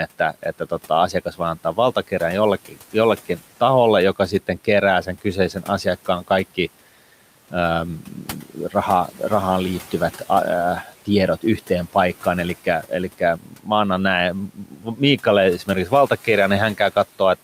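The noise suppressor mistook parts of the speech for background and turned them down with the room noise, so brief stretches sound swallowed or faint, dipping by about 8 to 12 dB. This speech cut by the noise suppressor occurs at 0.19–2.12 s, 2.65–2.94 s, 5.05–6.58 s after "taholle joka sitten kerää", 8.03–8.74 s before "raha rahaan liittyvät", 12.64–13.67 s, 14.48–15.19 s after "mä annan näin", and 15.66–16.27 s.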